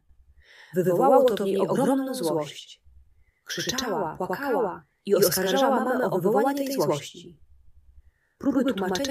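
Throughout, a channel delay (doubling) of about 93 ms, fitting a 4096-sample buffer, sums a late copy at equal level, heard as a distinct slap rather than a decaying reverb tail.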